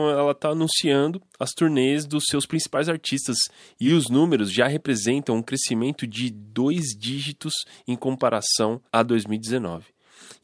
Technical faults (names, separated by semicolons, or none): none